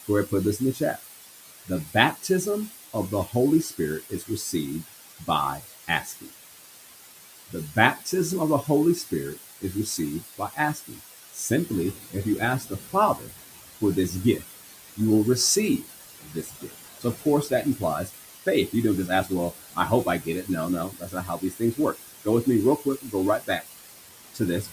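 A speech recording carrying a constant, even hiss from low bit depth with dither: only 5 bits leave broadband noise nearly as loud as the speech, a flat grey floor across the spectrogram. Noise suppressor artifacts run throughout, pushing that residue down between the words and letting it rise under them. The suppressor also cuts speech, dropping soft parts by about 15 to 17 dB across 0.0 to 8.13 s (ending just before "of the"), 8.62 to 14.99 s (starting right after "of the"), 15.78 to 18.74 s, 19.07 to 20.49 s and 20.88 s to the end. These show as sudden dips in the waveform envelope and missing consonant energy on the spectrogram. The room noise, which rises partway through to sit about 19 dB below the speech, belongs to the recording itself.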